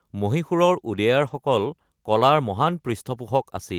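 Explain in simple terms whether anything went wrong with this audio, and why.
Between 1.23 and 1.37 s the speech briefly turns rough and grainy. This is a lost packet rebuilt from error correction: a few chunks of sound went missing, and the decoder played the low-quality backup copies carried in the following chunks. Unlike an ordinary dropout, there's no silence or stutter, just that short patch of coarser sound.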